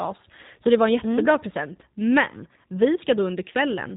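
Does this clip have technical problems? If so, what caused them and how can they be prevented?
Yes. G.729 codec damage runs through the whole speech clip. Nothing above about 3.8 kHz survives. The speech sounds rough and synthetic, which fits an 8 kbit/s codec rebuilding each frame from a vocal tract filter, pitch predictor and sparse pulses. To prevent it, use a wideband codec at a higher bitrate.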